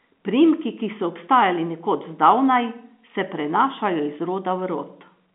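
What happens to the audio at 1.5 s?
Nothing goes wrong at 1.5 s: the speech carries on intact, with the narrow G.711 telephone band simply capping everything at about 3.8 kHz as it does throughout.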